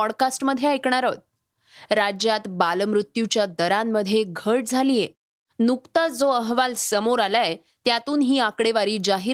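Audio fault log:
5.97–8.23 s, call bitrate drop: the speech turns coarse and watery, settling at its roughest for about 1.2 s before clearing. The sound fits an encoder pushed from around 32 kbps down to roughly 17 kbps after the call's bandwidth estimate fell, so detail is coded more crudely and the top end is trimmed. On a spectrogram the upper band thins or cuts off flat across this span, with smeared, blotchy harmonics. The waveform envelope looks largely unchanged.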